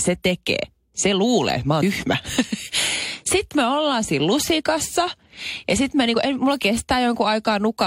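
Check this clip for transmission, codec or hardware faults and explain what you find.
The clip has compressed frames skipped three times, at 0.63 s, at 1.81 s just after "luulee mä", and at 6.13 s between "lusikassa ja sitten mä" and "en mulla". Whole compressed frames are missing, which fits a frame of about 23 ms. The speech jumps ahead by roughly a tenth of a second at the first two points and by a single frame at the third. At each join the speech jumps abruptly rather than leaving a silent gap.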